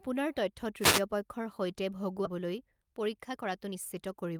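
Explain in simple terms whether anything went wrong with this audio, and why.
Three things go wrong in this speech clip.

From 0.80 to 1.02 s there is a wireless microphone noise hit: a quick swish of static washes over the sound just before the words "পক্ষৰ সৈতে". The radio link from the microphone briefly faded, so the receiver's own hiss rose and covered the signal. Unlike a dropout, the sound doesn't go silent. It is buried under noise for about a fifth of a second.

Right after "পক্ষৰ সৈতে", at 2.25 to 2.27 s, the audio does a skip ahead. Roughly seven tenths of a second of speech simply vanishes, and the two sides are stitched together with no pause in between. That missing stretch is what separates it from a gap or dropout: you don't hear a silence. You hear the talk jump forward, as if a piece was cut out.

From 2.29 s to the end, around 4.39 s, there is a jitter buffer speed-up. 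Audio had piled up waiting to be played, so the receiver trimmed tiny slices out again and again, about three tenths of a second in total, making playback run at 114% speed. The pitch stays the same, which sets it apart from a sped-up tape. The speech just sounds hurried, not higher.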